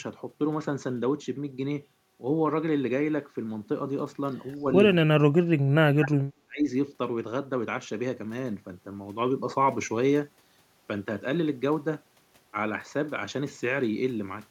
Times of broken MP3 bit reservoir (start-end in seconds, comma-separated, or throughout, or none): none